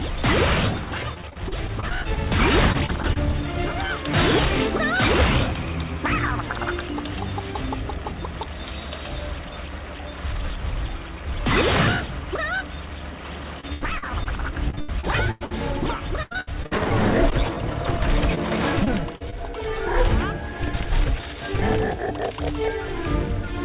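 Packets went missing again and again from 1.14 to 3.18 s, 13.6 to 15.52 s, 16.22 to 17.35 s and 18.35 to 19.34 s. The receiver patched each hole by stretching the preceding sound. This is repeated packet loss with a robotic sound: choppy audio with pieces missing and gaps up to 96 ms. The worst stretches are in the middle, all heard through a telephone band ending at 4 kHz.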